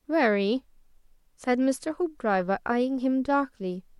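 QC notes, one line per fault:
Nothing stood out on listening to this speech recording.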